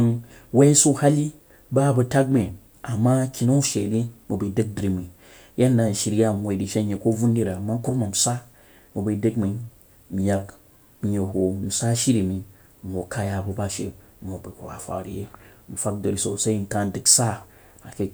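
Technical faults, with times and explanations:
Nothing technical goes wrong anywhere in this speech recording, so there's nothing to list here.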